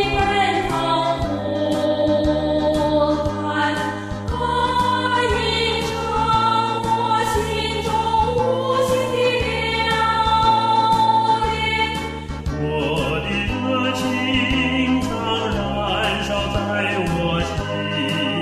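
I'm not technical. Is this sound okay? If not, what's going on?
Yes, there's nothing technically wrong with this sound that I can hear: the signal stays steady and intact the whole way, with no breaks, distortion or glitches anywhere.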